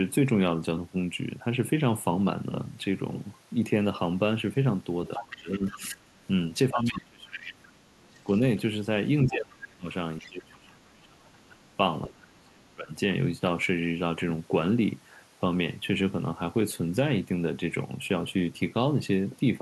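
From 5.15 to 6.26 s a second, fainter voice comes through about 10 dB under the main talker. This is the other side's voice leaking through: the far end, played on the talker's loudspeaker, was likely picked up again by the microphone and not fully removed by the echo canceller. In the same span, from 5.17 to 6.12 s, the main voice sinks by up to about 20 dB for roughly 0.7 s in total. That is speech suppressed in double talk: with both sides talking at once, the canceller likely could not separate its own talker from the echo and turned both down. From 6.71 to 8.27 s the voice drops again, by up to about 30 dB over roughly 1.5 s, likely the same double-talk suppression. Around it, leaked far-end scraps surface at 6.84 to 6.91 s, about 20 dB down, and from 7.66 to 8.38 s, about 30 dB down, both likely residual echo. The longest suppression runs from 9.26 to 12.9 s, cutting the voice by up to about 30 dB for roughly 3 s in total, likely from both sides speaking together. 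A brief leaked fragment at 10.19 to 10.28 s sits about 25 dB below the speech, likely uncancelled echo.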